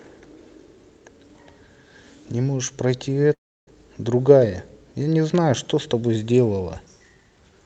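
From 3.33 s to 3.69 s the speech cuts out in what sounds like a long network dropout, likely a run of lost packets. The receiver stretches the last sound into a fading buzz, then leaves near-silence for roughly a third of a second before speech resumes with that stretch missing. On a waveform the envelope collapses to a flat line; on a spectrogram, smeared harmonics fade into a dark gap. The spectrum throughout stops near 8 kHz, as the call codec's bandwidth sets.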